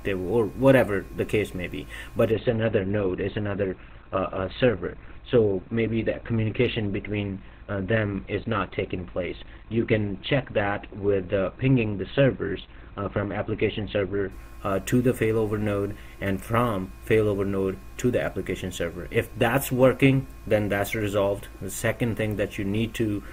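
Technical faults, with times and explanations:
2.32–14.32 s, adaptive stream at a lower bitrate: the treble suddenly disappears above 4.5 kHz and codec artefacts thicken, with no gap at either switch. The player dropped to a much cheaper rendition, consistent with Opus falling from 64 to 12 kbit/s.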